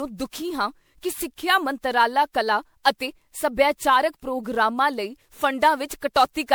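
Generation loss runs through the whole of this speech, from start to finish. The speech sounds swirly and hollow, with smeared consonant attacks and a watery, phasey texture that is worse than a single MP3 pass would give; nothing reaches above about 20.9 kHz. The likely cause is repeated MP3 encoding, around ten passes at a rate that points to 128 kbit/s, each requantising on a shifted frame grid so noise and spectral holes accumulate.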